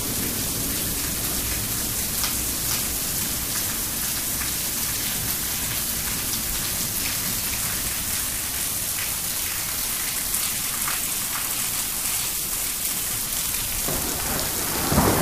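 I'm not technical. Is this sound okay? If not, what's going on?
No. A doubled audio track, likely from a second, slower recording path, plays everything again about half a second later, somewhat quieter, throughout.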